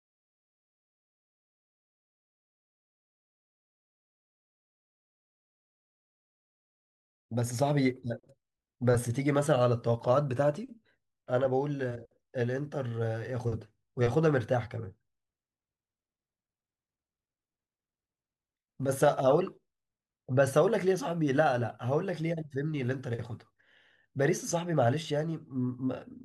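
No technical faults can be heard anywhere in this recording.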